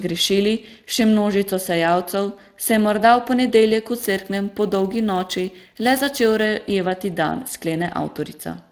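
It's a speech clip carrying plainly audible Speex codec damage from start to finish. The voice has a grainy, hoarse texture because the codec's CELP model is short of bits to describe the excitation behind each sound, and nothing gets through above 15.4 kHz. The amount of damage points to a Speex stream at around 22 kbps. From 4.01 to 6.45 s there's sample clock jitter as well: the converter's clock wobbles by a few microseconds, so each sample lands slightly off time. The error scales with how fast the waveform is moving, so it comes through as a fizzy roughness riding on the louder and brighter parts of the speech, sitting roughly 25 dB below the signal and dropping away in the gaps.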